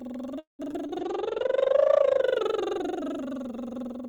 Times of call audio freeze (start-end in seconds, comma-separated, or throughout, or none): 0.39-0.61